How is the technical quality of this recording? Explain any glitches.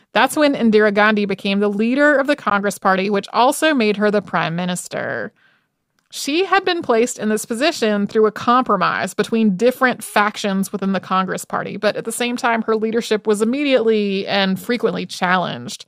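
The speech has one audible glitch: a Bluetooth dropout from 2.50 to 2.54 s. The sound cuts out, leaving a silent gap of about 14 ms before the speech resumes mid-flow, skipping ahead rather than picking up where it stopped. The likely cause is a wireless packet that failed to reach the headphones in time and was discarded. The short gap fits a single lost packet. It is heard as a brief hole in the speech.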